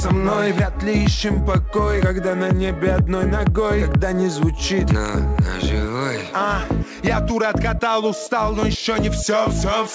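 No technical faults are audible.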